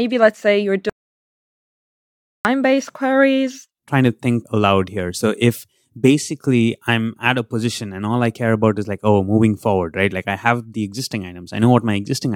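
After "let's say you're" at 0.90 s, speech cuts to dead silence until 2.45 s, resuming at "queries trying to think": an audio dropout to silence, likely from a lost input.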